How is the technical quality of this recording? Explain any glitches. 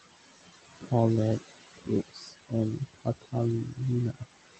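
The technical quality is held back by the noise suppression, which acts on the whole speech clip and also eats into the speech itself in three places. The room noise sits about 10 dB below the speech, and the Opus call path limits the audio to a band of about 8 kHz.

Noise suppressor artifacts run throughout. The suppressor estimates the steady room noise and pulls those bands down by about 16 dB, frame by frame. Between phrases the background drops away, then rises back under the speech, so the background pumps. On a spectrogram the noise floor looks patchy and speckled, with isolated time-frequency blobs instead of a smooth haze. The waveform shows near-silent gaps that fill in whenever speech starts.

Speech cut by the noise suppressor occurs at 0.81–0.91 s (down by up to about 12 dB), 2.08–2.52 s (up to about 18 dB, roughly a third of a second affected) and 2.79–3.34 s (up to about 20 dB, about a fifth of a second affected). 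In these stretches the suppressor mistook quieter speech energy for noise and attenuated it with the background. The affected speech sounds swallowed or faint. The spectrogram shows speech energy abruptly thinned or missing, and the waveform envelope dips sharply mid-phrase.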